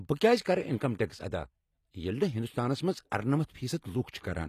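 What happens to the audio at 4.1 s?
At 4.11 s a pre-echo begins, lasting about 28 ms to 4.14 s. A short hiss comes before a sharp attack, and the attack sounds soft and smeared. A transform codec spreads its quantisation noise across a whole block. This attack falls late in its block. So noise sized for the loud onset also fills the quiet stretch just before it.

Clock slip clicks also run through this moment. They are regular ticks about every 0.2 s, from 0.11 s to 4.35 s. There are around twenty in all. Each one is a single sample dropped or repeated. The likely cause is two devices on unmatched clocks, off by roughly 100 ppm. Each time the drift adds up to one whole sample, the stream slips.

Around 4.1 s the HE-AAC compression damage is also plainly audible. The treble sounds gritty and metallic, and nothing remains above 14.9 kHz. The likely cause is HE-AAC at a low bitrate, which fits about 24 kbps. 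The codec keeps only the lower spectrum. It rebuilds the treble by copying lower bands upward under a coarse envelope, so harmonics fail to line up across the crossover.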